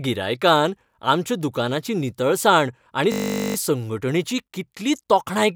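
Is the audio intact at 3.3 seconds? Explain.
No, from 3.12 to 3.56 s a steady 50 Hz buzz replaces the speech before "संघटणेची कितली": a system hang loop repeating one 20 ms buffer 22 times.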